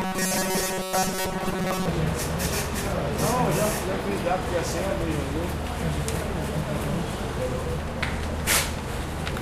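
From 0.01 s to 1.88 s the sound takes on a robotic quality from repeated short buffers: a rigid, metallic buzz at 188 Hz comes in while the overall shape still comes through loosely. This is likely the playback path running short of fresh data and looping the last few milliseconds to cover the gaps. A 188 Hz buzz fits a repeated chunk of about 5.3 ms, and most of the material in that stretch is repeats rather than new sound.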